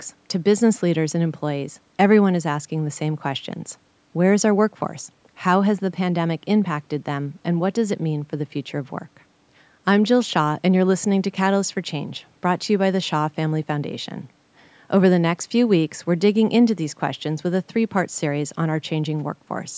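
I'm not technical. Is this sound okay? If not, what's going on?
Yes, there's nothing wrong with this recording.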